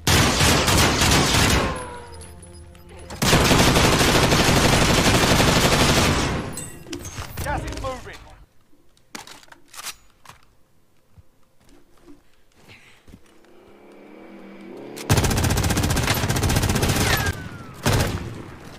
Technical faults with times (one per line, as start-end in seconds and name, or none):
0.44 damaged data in a compressed stream
4.09 damaged data in a compressed stream